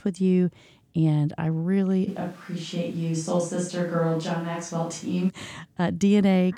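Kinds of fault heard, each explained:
Switch to a distant microphone: After "I really", the speech turns suddenly roomy and thin. It drops about 5 dB. Room noise grows. A farther microphone likely took over.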